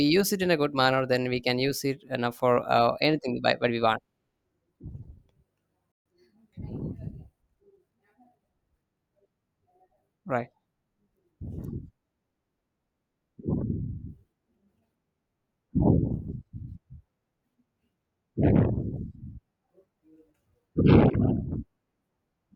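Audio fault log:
5.92–6.06 s, playback stall: speech cuts to silence for 136 ms mid-flow, then resumes, likely because the player briefly ran out of buffered data.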